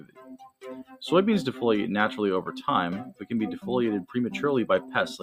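A speech-style noise suppressor has been left running on this sound the whole way through, so steady parts get treated as noise and the level pumps up and down by roughly 10 dB. Right at the start, from 0 to 0.64 s, the sound gets cut by the noise suppressor, dipping as much as about 19 dB for roughly half a second before it lets go.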